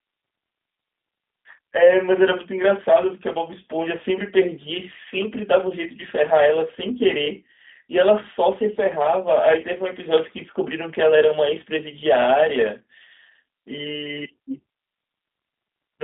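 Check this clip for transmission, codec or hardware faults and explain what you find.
One fault runs through the whole clip: the speech has passed through a G.729 codec. From start to finish, everything above 3.8 kHz is gone, and the usable band sits roughly between 250 Hz and 3.6 kHz. The coder rebuilds each 10 ms frame from a vocal-tract filter, a pitch predictor and a few sparse pulses, which fits an 8 kbit/s G.729A stream. That gives plainly audible roughness and a synthetic buzz. A spectrogram shows a hard ceiling near 3.8 kHz with a smeared, pulse-textured harmonic structure below it.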